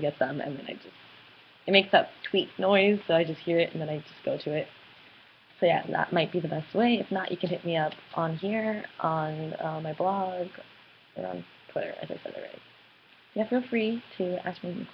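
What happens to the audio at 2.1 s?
Nothing goes wrong at 2.1 s: the audio there is intact, with no dropout, click, glitch or other fault.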